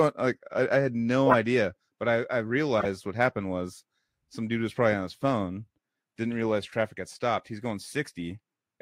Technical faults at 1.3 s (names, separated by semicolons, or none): corrupt frame decoded